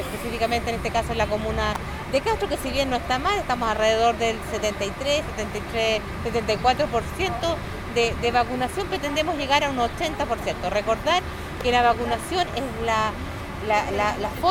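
At 1.75 s and again at 11.61 s, an electrical switching spike snaps sharply over the sound, the first near -10 dBFS, the second softer. These are likely pickup from nearby switching arcs, and unlike a dropout click, nothing underneath is lost.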